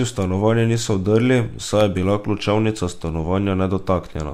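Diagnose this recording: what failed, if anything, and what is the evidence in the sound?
The fault sits in storage and playback: CD scratch ticks. Right after "v stanovanje niso vdrli", from 1.81 to 2.47 s, four very short ticks come at roughly five a second, none longer than about a millisecond and a half. Once per revolution, a damaged spot on the disc wipes out more data than error correction can rebuild, so the player patches or mutes those few samples. The steady, rotation-locked spacing sets it apart from network packet loss or buffer underruns, which produce irregular, longer gaps.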